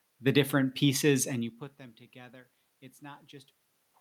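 Nothing stood out on listening to this speech recording beyond the room noise around the microphone and a change in level at about a second and a half, where the talker moves relative to the microphone.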